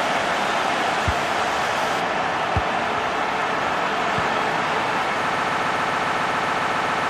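From the start to 2.0 s, pre-emphasis was left on: the treble lift of the CD 50/15 µs curve was applied but the matching de-emphasis on playback never happened. With nothing to cancel the boost, the top end stays raised by about 8 dB at 10 kHz relative to 1 kHz, so this opening stretch sounds thin, glassy and overly bright, with hissing high-frequency detail pushed forward.

At 5.34 s a broken-record loop begins and runs to the end. The player or stream most likely stalled and kept re-sending the last fragment it held, a 137 ms slice that repeats exactly, back to back, about 13 times. The result is a rapid, mechanical stutter with no forward progress, and whatever audio should have filled those final seconds is simply missing.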